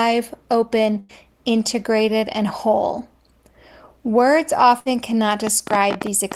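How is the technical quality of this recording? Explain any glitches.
The recording has two kinds of glitch: two short dropouts and a burst of clicking at the end.

Burst of packet loss, at 0.99 to 1.13 s and 4.80 to 4.88 s. Consecutive packets never arrived in time. The receiver stretched the last sound for 95 ms and then 58 ms, fading it. About 80 ms and 40 ms of speech are simply skipped.

Train of clicks, from 5.47 s to the end. Sharp, similar pops arrive unevenly, about 12 per second, standing well above the speech. They tick through pauses too. The likely cause is electrical interference or a faulty connection or power supply injecting repeated pulses.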